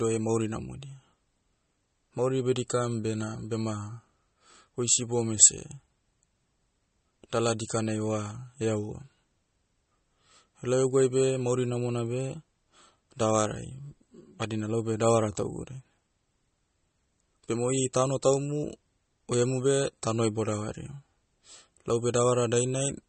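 MP3 compression runs throughout the speech, likely from encoding at a low bitrate consistent with about 32 kbps. Short of bits, the encoder has removed everything above 8.4 kHz and drops weak frequency components that flicker between frames, giving a dull, watery, swirling sound.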